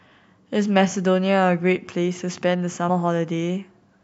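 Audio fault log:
2.88 s: damaged data in a compressed stream. A brief blip cuts into the speech for a split second. Part of the encoded data at this point arrived wrong. The decoder could not read the affected frame correctly. It then lost its place in the stream and had to find the next valid frame header. The result is a short glitch in the speech.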